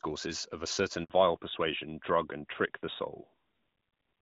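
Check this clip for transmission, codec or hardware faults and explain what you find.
Two faults show up in this speech, both at the same moment: a handover gap, then a fallback to narrowband.

At 1.04 s, right after "of a", the speech goes silent for 60 ms until 1.10 s. The phone was switching networks and no speech frames arrived, so the sound fades quickly and nothing is played. A normal packet loss would usually be filled with concealed, buzzy speech. Here the gap is clean silence, and the audio comes back with a different bandwidth, which points to a network switch.

From 1.10 s to the end, nothing remains above 4 kHz. The call dropped from HD Voice to an older narrowband codec, and the sound points to AMR-NB at about 12.2 kbit/s. Before the gap, the light AMR-WB coding at around 12.65 kbit/s kept content up to 7 kHz. After it, the speech is duller and rougher. A lower AMR-WB rate would also roughen the sound but would keep the wide band. 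Here the top is cut off abruptly at 4 kHz.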